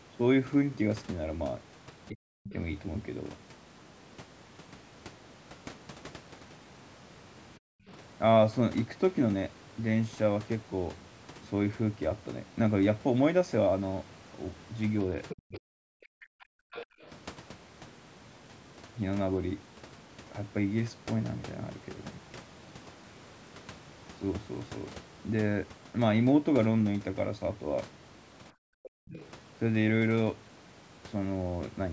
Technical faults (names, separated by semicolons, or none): speech suppressed in double talk; other side's voice leaking through; background gated by the echo canceller